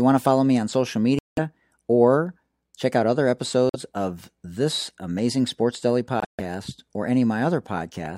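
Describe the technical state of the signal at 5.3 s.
At 5.3 s the speech signal is intact, with no audible fault at that moment.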